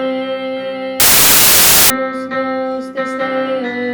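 From 1.00 s to 1.90 s the audio collapses into loud, harsh broadband noise, the signature of samples built from the wrong bytes. For this stretch the reader assembles each sample from misaligned or misordered bytes, whether offset by one, swapped in order or read with the wrong alignment, so the rapidly changing low-order bits land in the most significant position. The result is noise close to white on loud sounds and often a pitched buzz on softer ones.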